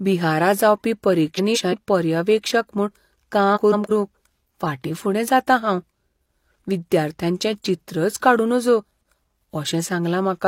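Frames out of order at 1.35–1.74 s (after "बिहारा जावपी", before "पर्यवेक्षक म्हूण"), 3.55–3.91 s, and 8.95–9.12 s (after "विद्यार्थ्यांचें चित्रच काडूं नजो"): two runs of about 170 ms play swapped, giving a garbled flutter. Unlike a dropout or repeat, nothing is lost or doubled.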